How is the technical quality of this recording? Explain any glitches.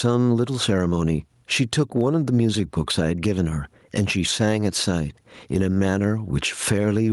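The technical quality is poor because of gain pumping across the whole clip. Input gain was likely set far too high, so a fast limiter clamps each loud syllable, with the gain swinging by around 15 dB. The waveform looks flattened.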